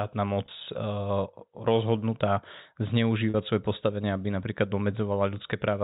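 Packet loss with pitch repetition occurs at 0.46–0.48 s and again at 3.30–3.34 s, just before "svoje postavenie aby". The receiver fills the gaps of 20 ms and 40 ms by repeating the last pitch period, so each gap comes across as a brief, held, buzzy tone in the telephone-band G.711 sound.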